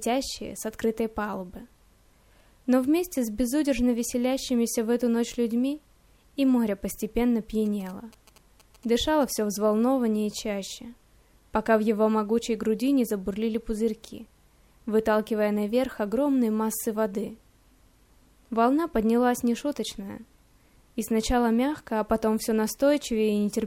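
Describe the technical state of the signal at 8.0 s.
At 8.0 s the signal carries GSM signalling bursts, running from 7.66 to 9.56 s. A nearby 2G handset's intermittent transmissions are rectified by the audio circuitry, producing a galloping pattern of ticks and short 217 Hz buzzes, roughly 25 dB below the programme.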